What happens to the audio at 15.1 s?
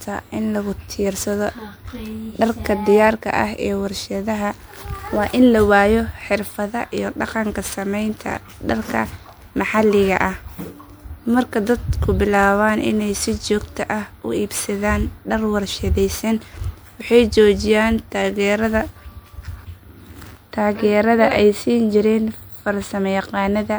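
Generation loss is present at 15.1 s and runs through the whole clip. The speech is likely MP3, re-encoded around four times at a rate fitting 128 kbit/s, each pass requantising on a shifted frame grid, so the sound is swirly, hollow and smeared, with blurred consonant attacks.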